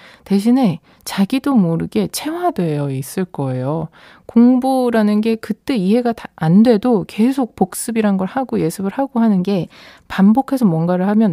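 Speech clip with two drift correction steps: from 2.49 to 4.00 s it slows 6% and drops about a semitone, then 9.40 to 9.97 s runs 6% fast and a semitone sharp, likely clock-sync rate jumps.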